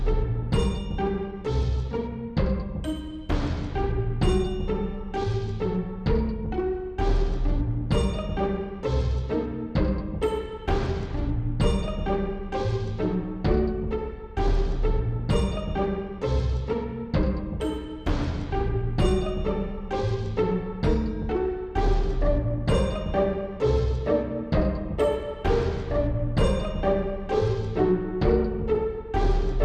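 No technical faults can be heard anywhere in the recording; the signal stays continuous and steady throughout.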